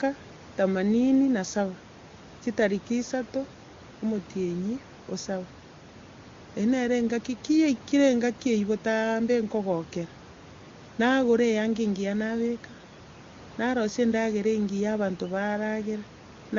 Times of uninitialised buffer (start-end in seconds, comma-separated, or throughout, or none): none